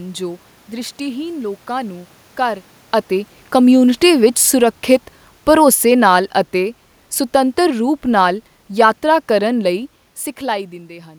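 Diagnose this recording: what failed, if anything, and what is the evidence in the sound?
Call processing: automatic gain falling between 5.47 and 9.86 s. Speech and room noise sink together by about 7 dB as the AGC lowers its gain.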